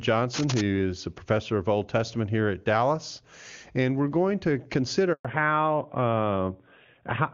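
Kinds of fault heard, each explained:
Cable scratch noise: from 0.33 to 0.62 s a dense, uneven rustle sits about 5 dB below the speech, likely from a worn connector being moved; spectrogram shows broadband speckled bursts.
Handover gap: at 5.13 s the speech drops out for 120 ms while the call switches networks; the waveform shows a flat silent stretch.
Fallback to narrowband: from 5.25 s to the end, the call drops from wideband to narrowband coding and sounds duller, with nothing above 4 kHz; the spectrogram is cut flat at that line.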